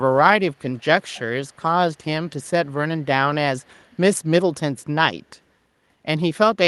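Echo leak, at 0.74–0.85, 1.02–1.2, 1.48–1.62, 2.4–2.48 and 3.57–3.9 s in this speech clip: faint, delayed scraps of the talker come back about 134 ms behind the original, mostly about 35 to 40 dB down and loudest near 1.1 s at about 25 dB below. The steady delay and the brief, fragmented bursts point to a likely cause in a far-end loudspeaker whose echo canceller let residual pickup through, heard over a call codec whose top end stops around 12 kHz.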